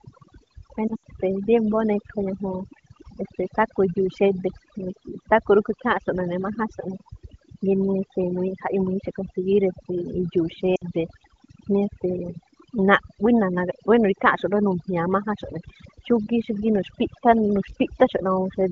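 A speech recording carried over AMR wideband (HD Voice), whose light coding points to a mid-to-high bitrate, has two faults. Overdone noise removal, set too strong throughout, shuts off frequency bands near its noise estimate, leaving a lowered background that breaks up into twinkling specks. Lost AMR speech frames fail their checksum, so the decoder reuses its last good settings with falling gain. From 0.87 to 1.02 s about 100 ms drops out in scattered gaps, the longest 80 ms, producing drops to near silence. From 10.75 to 10.84 s a 60 ms loss gives a drop to near silence, and the voice returns weak for a moment.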